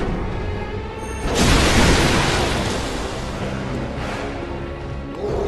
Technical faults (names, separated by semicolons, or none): none